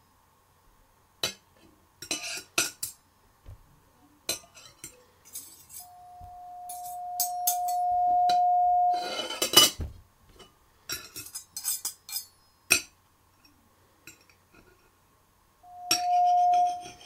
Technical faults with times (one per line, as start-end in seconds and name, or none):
5.79-9.31 loudspeaker feedback squeal
15.63-17.05 loudspeaker feedback squeal